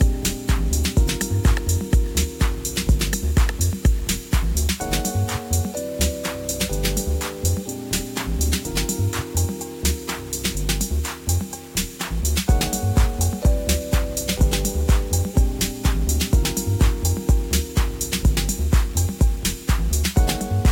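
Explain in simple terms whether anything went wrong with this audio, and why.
Low bit depth without dither runs through the whole clip, start to finish. The sound is grainy and gritty, roughness that shifts along with it, worst in quiet parts. The likely cause is rounding to very few levels, as with a 6-bit signal, without added noise to smooth the steps.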